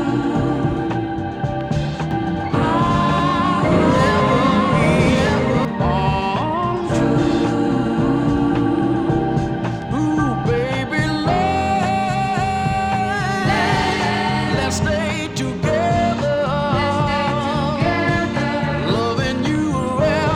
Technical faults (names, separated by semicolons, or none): doubled audio track